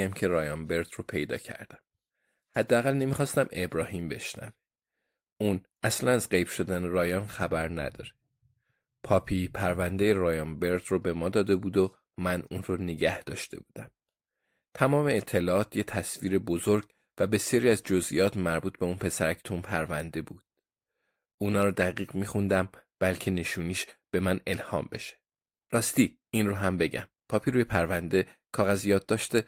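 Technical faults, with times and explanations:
No technical faults, with times and explanations, are present in this speech recording.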